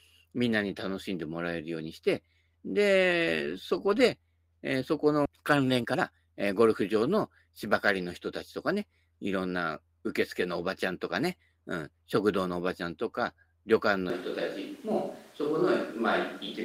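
It's a speech clip with three problems. Around 5.25 to 5.27 s there's a skip ahead: roughly a second of audio is gone and the two sides butt together with no gap. Right after, from 5.29 to 7.25 s, a jitter buffer speed-up kicks in, running about 120% speed at unchanged pitch while trimming roughly 0.4 s of backlog, so it sounds rushed. Then from 14.1 s to the end the sound turns roomy and hollow, with level roughly unchanged but background noise only about 25 dB down, likely a switch to a distant microphone.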